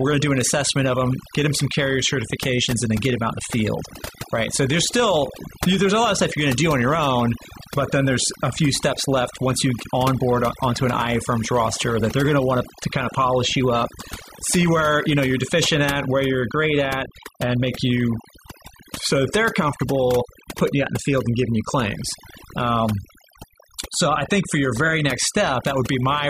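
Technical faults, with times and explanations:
Throughout, overdone noise removal: the background drops and breaks up into twinkling specks. An over-strong noise reducer shuts off frequency bands near its noise estimate, quiet speech detail included; unlike a low-pass, highs flicker instead of vanishing.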